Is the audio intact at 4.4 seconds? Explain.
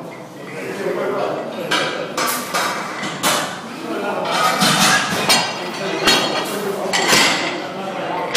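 No. At 4.4 seconds the audio is hard clipping, in a stretch that runs from 4.35 to 5.39 s. The level there is driven about 9 dB past what the signal path can carry. Every peak above that ceiling is sliced off flat. Those squared-off tops add harmonics high in the spectrum. With this much overload, the loud parts come through as a harsh, buzzy fuzz rather than the odd crackle.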